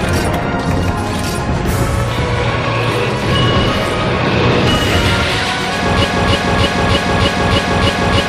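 At 6.05 s a broken-record loop begins: a 0.31 s fragment repeats exactly, back to back, seven times to the end, likely from a stalled player, encoder or stream. Unlike an echo, the repeats are identical and undecayed, and the audio that should follow is lost.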